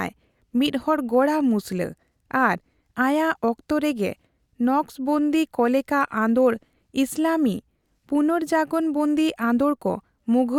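Listening closely to the speech, nothing stood out as a technical fault at any point.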